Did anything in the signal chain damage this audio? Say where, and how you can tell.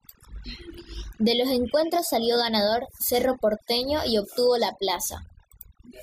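Yes. Overdone noise removal, in the call-processing stage, runs throughout. Pauses collapse to near silence with twinkling specks: a suppressor set too aggressively is gating individual frequency bands near its noise estimate, taking quiet speech components with them.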